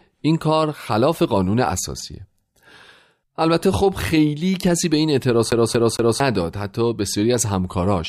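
From 5.51 to 6.20 s the speech stutters, repeating a roughly 0.23 s fragment three times: a CD stuck on one turn, the laser jumping back each rotation.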